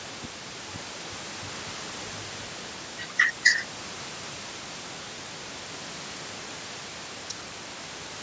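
No faults detected in the speech: the band stops at 8 kHz with the bass trimmed, as normal call microphone processing does, and room noise sits about 20 dB below the speech.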